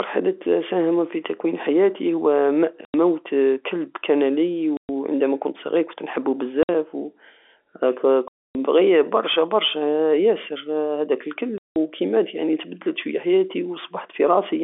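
Packet loss filled with silence cuts dead holes into the speech at 2.85 s (90 ms), 4.77 s (120 ms), 6.63 s (60 ms), 8.28 s (270 ms) and 11.58 s (180 ms). Every gap is a multiple of 30 ms, which fits 30 ms packets. The holes are true silence with hard edges rather than smeared or repeated sound, which sets them apart from concealed loss. Outside the gaps the G.711 telephone band remains.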